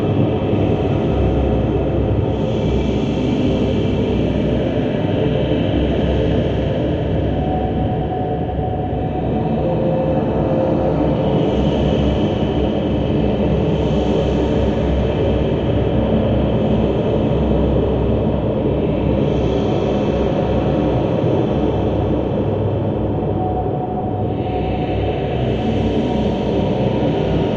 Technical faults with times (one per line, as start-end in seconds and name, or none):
none